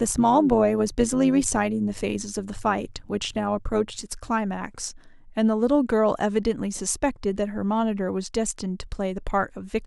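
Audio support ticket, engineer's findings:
Metallic buzz on speech, 0.0–4.04 s, level pulsing about 6 dB at around 100 Hz. Overlap-add ripple in the frame-based resynthesis stage: window overlap not summing to constant gain, so level dips once per frame.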